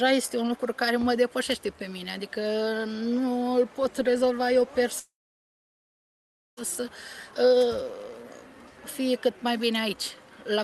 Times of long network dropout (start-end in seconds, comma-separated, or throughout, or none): 4.99-6.59